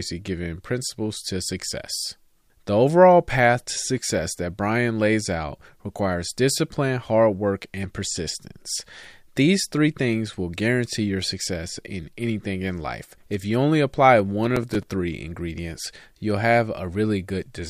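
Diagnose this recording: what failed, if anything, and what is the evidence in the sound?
Processor overload crackle at the driver/buffer stage, 14.44–14.88 s: a gritty burst as roughly ten buffers of a few milliseconds each miss their deadline and replay stale audio. Unlike network loss, there are no long silent gaps.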